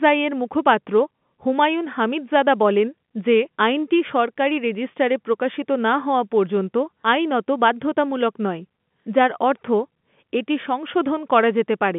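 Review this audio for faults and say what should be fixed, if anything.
Nothing here needs fixing: it's ordinary telephone-band speech carried over G.711, with the line band running up to about 3.5 kHz and no faults to chase.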